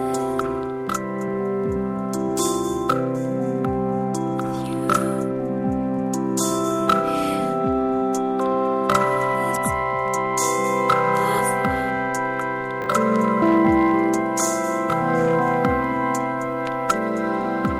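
A brief jumbled hiccup at 12.82 to 12.86 s is chunks out of order. Two 20 ms chunks of sound play swapped, the first arriving one chunk late, so nothing is lost but three hard joins and a scrambled instant result.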